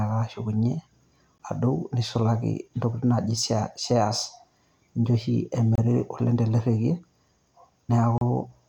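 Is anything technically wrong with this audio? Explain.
Yes. There are gaps at the joins of encoded pieces, at 1.38 s, from 5.75 to 5.78 s, and from 8.18 to 8.21 s. The speech was encoded in separate sections and spliced without trimming, so each join keeps the encoder's start-up delay and last-frame padding. Each one opens a short silence in the speech with smeared edges: about 15 ms, then 26 ms between "ninche oshi" and "oleng' tele", then 32 ms. The sound resumes exactly where it broke off.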